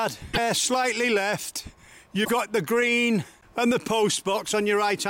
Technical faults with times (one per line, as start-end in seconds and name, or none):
0.30-0.38 damaged data in a compressed stream
2.21-2.29 damaged data in a compressed stream